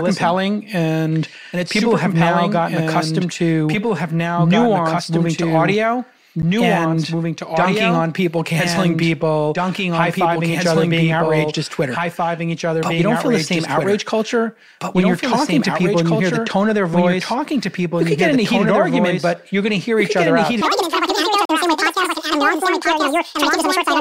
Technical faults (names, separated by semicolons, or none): doubled audio track; block of digital silence; section at the wrong speed